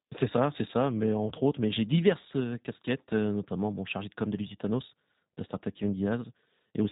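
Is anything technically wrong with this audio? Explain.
Yes. For its whole length, this speech carries plainly audible G.729 codec damage. The coder models each 10 ms frame with a vocal-tract filter, a pitch predictor and a few fixed pulses, a sparse rebuild that points to the 8 kbit/s G.729A variant. Nothing above 4 kHz survives, so sibilants lose their hiss and the voice sounds rough and faintly synthetic. A spectrogram shows a hard ceiling at 4 kHz with smeared, pulse-like harmonics beneath it.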